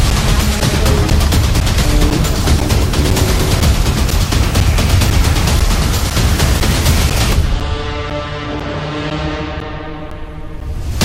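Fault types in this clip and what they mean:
Periodic USB or driver dropouts: something keeps stalling the audio path every 0.5 s, and each stall punches a gap of about 10 ms into the sound, filled with silence, so you hear roughly twenty evenly spaced ticks from 0.10 to 10.61 s.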